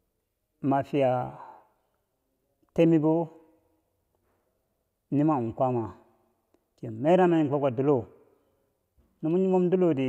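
Nothing goes wrong anywhere in this bit of speech, so there's no technical fault to point out.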